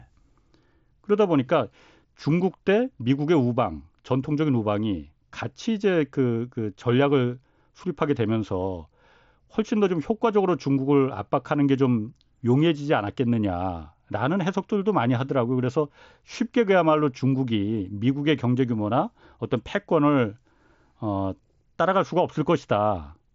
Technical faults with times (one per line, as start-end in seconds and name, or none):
none